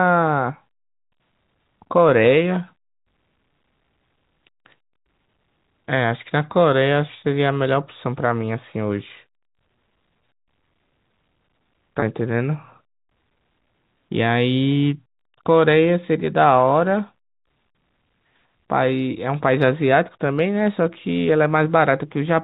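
A speech clip with a brief buzzy, held quality at 12.00 to 12.02 s, where the voice seems to freeze on one tone for an instant before carrying on. This is packet loss with pitch repetition: about 20 ms of audio went missing, which fits a single lost packet, and the receiver filled the gap by repeating the last pitch period. The gap was short enough that the repetition never faded into silence. The audio is band-limited by G.711 telephone coding, with nothing above 4 kHz.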